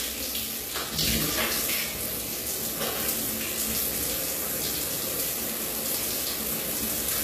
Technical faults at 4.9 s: HE-AAC compression

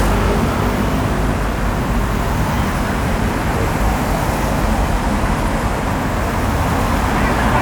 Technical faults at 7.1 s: none

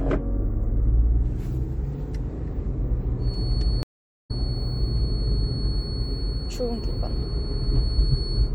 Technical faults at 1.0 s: MP3 compression

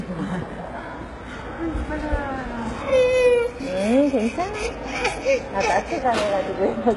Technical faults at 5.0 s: HE-AAC compression

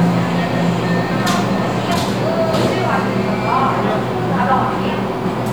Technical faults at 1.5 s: doubled audio track

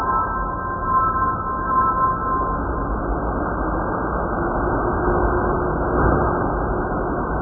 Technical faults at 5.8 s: AAC compression

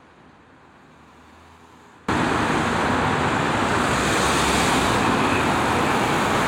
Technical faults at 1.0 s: audio dropout to a faint residue

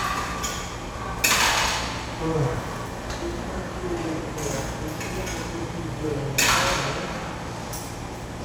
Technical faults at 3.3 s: none

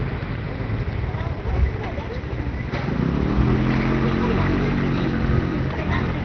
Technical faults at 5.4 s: none

